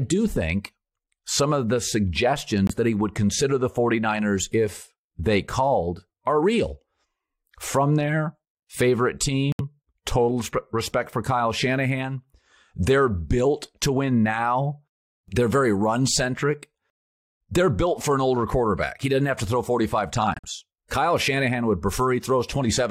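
Speech that drops abruptly to dead silence three times: a 42 ms hole at 2.67 s just before "that he would consider", an 88 ms gap at 9.52 s between "there favorite" and "total respect for", and a 105 ms one at 20.34 s. These are corrupt frames muted: damaged compressed frames were rejected by the decoder and replaced with silence, with timing preserved. The lengths fit roughly one, three and four lost frames.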